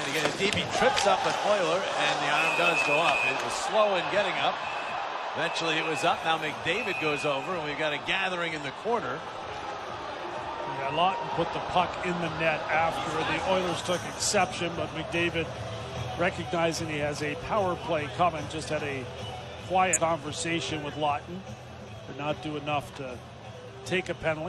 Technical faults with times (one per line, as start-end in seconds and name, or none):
19.93-19.99 compressed frames skipped
23.13-23.18 compressed frames skipped